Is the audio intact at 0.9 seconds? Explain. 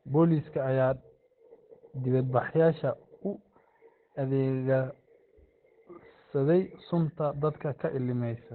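No. At 0.9 s, as throughout the clip, the speech sounds muffled and hoarse, likely from Opus compression in its narrowband speech mode at a rate that fits about 12 kbps. A spectrogram shows nothing above 4.2 kHz.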